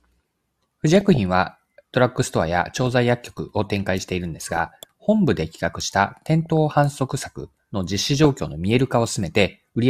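Brief noise blips break through the speech at 0.90–1.17, 2.63–2.92, 4.39–4.70, 6.46 and 7.98–8.48 s. This is DAB burbling, where bit errors under weak reception slip past error correction, put short blips of noise into single MP2 sub-bands and make sub-bands jump in level for up to a frame.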